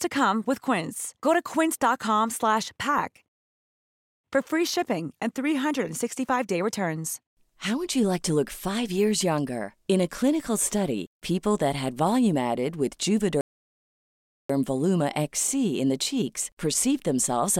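A speech recording with two playback stalls. The audio drops to silence from 3.28 to 4.24 s, just before "for free shipping and". It stops again from 13.41 to 14.50 s, right after "had volume added with". Each gap lasts about a second. The player likely ran short of data or was blocked.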